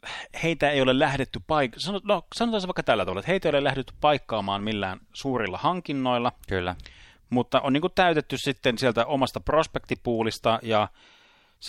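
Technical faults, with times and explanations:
No technical faults are audible anywhere in the recording.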